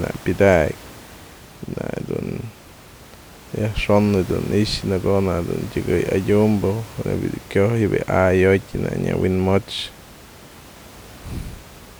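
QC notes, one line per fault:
No faults are heard in the speech. Some room noise sits in the background, about 21 dB below the speech.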